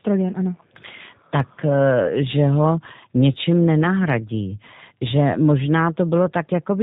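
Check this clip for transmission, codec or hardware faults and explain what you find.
One fault runs through the entire clip: G.729 codec damage, and it is plainly audible. From start to finish the speech sounds narrow and muffled, with nothing above 4 kHz, and carries a rough, slightly buzzy, synthetic texture. The codec, at a rate that fits 8 kbit/s, throws away the original waveform and resynthesises each 10 ms frame from a vocal tract filter, a pitch predictor and a handful of pulses. The words stay clear while the natural grain of the voice is lost.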